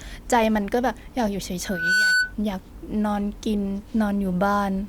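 From 1.64 s to 2.34 s a single piercing tone near 1.5 kHz rises out of the speech, swelling over roughly a third of a second into a squeal that sits a few decibels louder than the talking before it cuts off. This is loudspeaker feedback squeal: the microphone was hearing its own loudspeaker, and at 1.5 kHz the round trip gained more than it lost, so that frequency fed on itself and kept growing.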